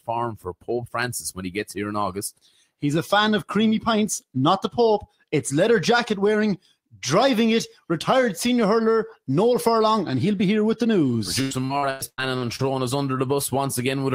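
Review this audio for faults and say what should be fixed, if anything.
A speech-tuned noise suppressor was left on, and it's treating the steady, sustained parts of this sound as noise, so levels pump by a few dB throughout. Switch it off or use a music mode.

The same suppressor turns sound down at 0.31–0.7 s, 1.34–1.73 s, 2.37–2.84 s, 5.02–5.33 s and 6.58–6.98 s, dipping about 16–18 dB and clipping decays. Bypassing suppression fixes this too.

Repeated packet loss hits 11.41–12.67 s. Gaps up to 100 ms get patched by stretching earlier audio, which sounds choppy and robotic. A steadier network path or a larger jitter buffer should prevent it.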